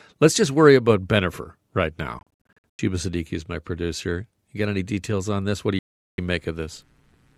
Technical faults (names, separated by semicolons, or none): Bluetooth dropout